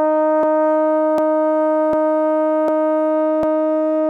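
Around 0.43, 1.18, 1.93, 2.68 and 3.43 s the music jumps back and replays about 250 ms, a clear overlapping chunks pattern: half-second chunks each starting a quarter-second early, so every join doubles a slice and lands as a regular stutter every 0.75 s.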